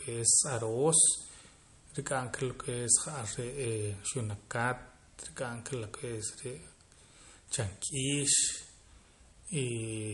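Throughout the clip, the speech was likely passed through MP3 compression at a starved bitrate, consistent with roughly 48 kbps. The encoder cut everything above 11.2 kHz and let weak detail flicker between frames, leaving the speech plainly watery and swirly, with dulled treble.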